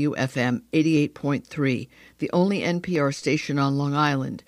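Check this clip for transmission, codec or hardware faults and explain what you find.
One fault turns up: audio missing between chunks at 2.96 s, just after "the only", likely from a 2 s chunk handover dropping roughly 15 ms and splicing both sides into a brief skip.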